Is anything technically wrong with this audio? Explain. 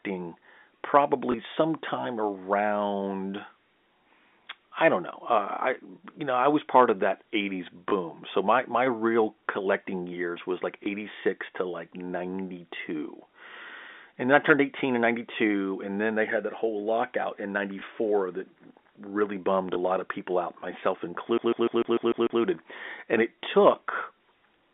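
Yes, two kinds of fault show up here, both riding on an ordinary narrowband phone line that sounds like G.711 A-law.

First, there's packet loss with the last packet repeated, at 1.32, 7.90, 10.84, 17.80 and 19.74 s. The 7.90 s one sits just before "so my my real", and the 19.74 s one falls between "that really bummed a" and "a lot of people". Each gap is 20 ms, which points to a single lost packet. The receiver filled it by replaying the previous chunk, and since that replay doesn't line up with the pitch cycle, each spot comes through as a brief blip.

Second, there's a CD stuck on one turn from 21.38 to 22.42 s, right after "of people out myself". A loop of about 149 ms plays back seven times in a row, like a laser jumping back to the same point on each revolution. You hear a fast, even machine-gun stutter of one tiny fragment, with a small dropout at every jump, before playback moves on.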